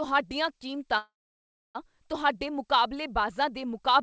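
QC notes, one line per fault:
0.98 to 1.77 s, call audio freeze. The speech stops and the last sound carries on as a brief buzz that fades. Then about 0.65 s of silence follows. The likely cause is packets held up in transit, so the jitter buffer ran dry and the receiver filled the gap itself. About 0.77 s was inserted. When audio resumes it picks up where it stopped, so nothing is lost, but everything after runs 0.77 s late. The band-limited sound, with nothing above 8 kHz, fits a wideband call codec.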